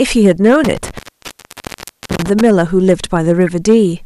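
Hard clipping runs through the whole speech clip. The signal overdrives a stage by about 4 dB, so a small share of peaks are cut flat and crackle.

From 0.64 to 2.41 s an intermittent contact opens and closes. The line is open for about 1.1 s in total, leaving dropouts with crackle at their edges and faint hiss between.

Within that stretch, at 1.25 to 1.28 s, a corrupt frame decoded gives a short, fairly loud chirp. Damaged data across a few frames put energy at wrong frequencies. A second corrupt frame decoded at 3.47 s makes another brief, loud blip.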